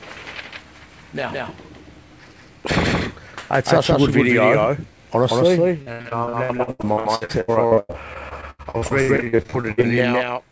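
From start to finish the clip carries a doubled audio track: a second full-band copy runs roughly 150 ms behind the first at about the same level. The likely cause is the same signal reaching the mix twice, once through a slower route or as a misaligned edit. It is not an echo or reverb. The trailing copy has no decay and no room colouring, so everything sounds smeared into a flat, exact slap rather than trailing off into a space.

From 5.82 to 9.85 s, repeated packet loss (robotic sound) takes over. Some forty short holes come one after another, the longest about 96 ms, and together they account for roughly 38% of that stretch. Each hole is filled by stretching the last bit of sound, so the audio turns choppy with pieces missing. Unlike a single dropout, the breaks recur in rapid succession. Unlike steady coding noise, they come and go within this window only. Throughout, the call path's band limit leaves nothing above 8 kHz, consistent with G.722.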